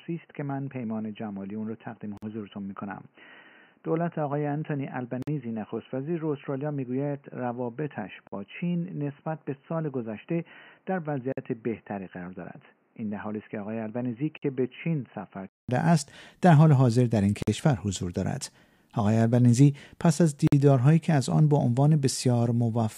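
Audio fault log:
0.0–15.69 s, input switched to a poorer device: the sound is dull and boxy with nothing above 3 kHz, about 10 dB quieter, and carries its own background noise roughly 40 dB below the signal. At 15.69 s a 200 ms silence is followed by full-band sound at normal level. The likely cause is capture on another microphone or a headset call profile. A simple low-pass filter would change only the bandwidth, but here tone, level and noise all change together at one join.
2.17, 5.22, 8.27, 11.32, 14.37, 17.42 and 20.47 s, gap between chunks: each is a 50 ms hole of silence, repeating every 3 s, which fits audio delivered in 3-second chunks with dead time before each starts. No sound is lost. After each hole it resumes exactly where it stopped, only later. Dropouts from packet loss fall at irregular times and remove sound, while these holes are evenly spaced and leave the sound intact.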